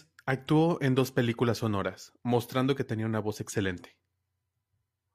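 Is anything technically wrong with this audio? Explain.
No, nothing is technically wrong with this audio.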